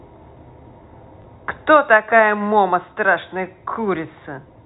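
At 1.22 s, packet loss with the last packet repeated: a 20 ms gap is filled by replaying audio, giving a small blip where the waveform shows a duplicated segment and a seam.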